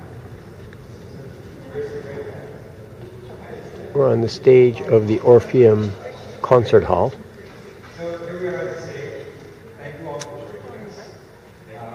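No technical faults are audible in this audio.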